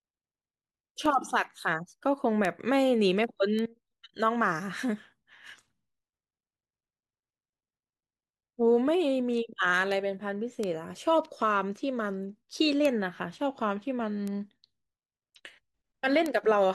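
A speech recording carrying eight bit error spikes, at 1.06, 2.45, 3.59, 9.92, 10.64, 12.85, 14.28 and 16.26 s. Each is a single dry, broadband tick with no relation to the talker, peaking around -10 to -22 dBFS, loudest at 12.85 and 16.26 s. The shape points to a flipped bit in storage or on a digital link: one or a few consecutive sample values jump by a power of two, then snap straight back.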